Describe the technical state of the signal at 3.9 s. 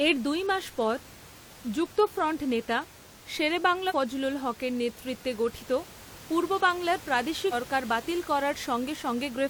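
At 3.9 s the speech is hit by damaged data in the compressed stream, spanning about 3.86 to 3.93 s. Corrupt bytes make the decoder misread the frames there and lose sync until it finds a valid frame header, so roughly 70 ms comes out as a brief disruption. A plain dropout would fall silent and a click would be a single sharp tick. The room noise sits about 20 dB below the speech.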